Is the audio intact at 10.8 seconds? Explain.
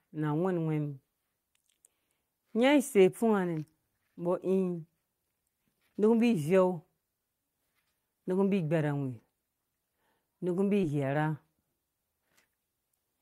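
No. At 10.81 to 10.85 s there is a short concealed packet loss. About 20 ms of the speech did not reach the decoder in time. The receiver covered the gap by extending the last sound, from its pitch if voiced and as shaped noise if not, for roughly 15 ms. It then blended back into the real audio. The result is a brief smear or wobble, and any very short sound in that span can drop out.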